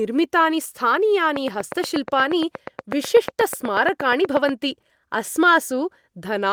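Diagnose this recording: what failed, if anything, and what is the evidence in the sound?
A train of clicks runs through the speech from 1.36 to 4.50 s. The pulses repeat at 8.3 per second with regular spacing, about thirty in all. They stand roughly 15 dB above the speech, so they tick clearly through the gaps too. Each click has much the same shape. The stage is likely the analogue wiring or interface, with interference from nearby equipment injecting a pulse at a steady rate.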